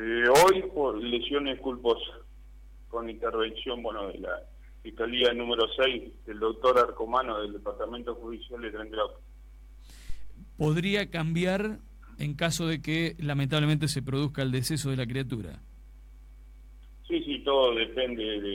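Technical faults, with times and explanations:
10.10 to 10.43 s, phantom power thump: a deep thump peaking at about -22 dBFS and fading within 74 ms as a supply step passes the coupling capacitors, cleaner and more abrupt than handling rumble.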